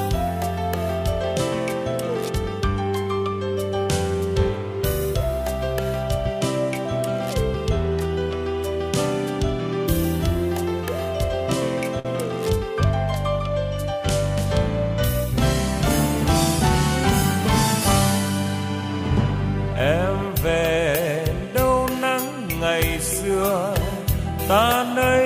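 At 11.99 s to 12.07 s there is a short stall from a late packet. The jitter buffer emptied, so the sound is held about 53 ms with a slight buzz or dip.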